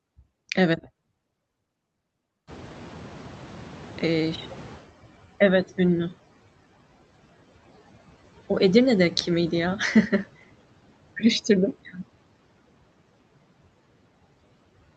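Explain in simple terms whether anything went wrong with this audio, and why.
Noise suppressor artifacts run through the whole clip. The background noise is pushed down between the words and rises under them.

At about 2.5 s the room noise gets much louder. From 2.47 to 5.24 s, the noise suppressor is catching up. The noise comes through strongly at first, then fades over nearly three seconds as the filter adjusts.

At 11.85 to 11.99 s, the speech is cut by the noise suppressor. For about a tenth of a second, part of the speech is mistaken for noise and turned down, so it sounds swallowed.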